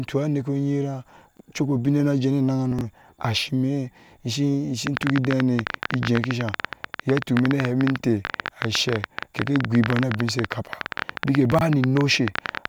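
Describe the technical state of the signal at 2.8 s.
At 2.8 s the signal shows chunks out of order, 2.72–2.81 s: a 23 ms block plays three blocks late, leaving three hard joins heard as a jumbled moment.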